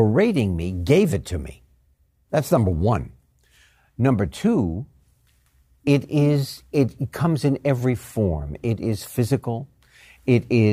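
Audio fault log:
No technical faults can be heard in this speech recording. Nothing in it calls for a timed entry in the log.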